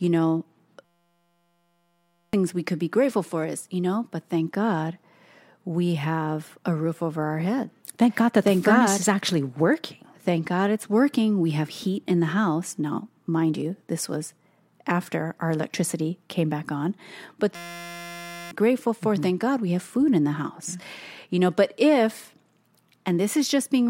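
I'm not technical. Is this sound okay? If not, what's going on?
No. Twice the speech is replaced by a steady, flat buzz: from 0.85 to 2.33 s, just before "we could be grateful", and from 17.55 to 18.51 s, just before "grateful for". This is a system hang loop. The computer briefly froze, and the sound hardware kept replaying the same tiny 5.8 ms slice about 172 times a second, which fits a 256-sample buffer. About a second and a half, then about a second, of speech is lost.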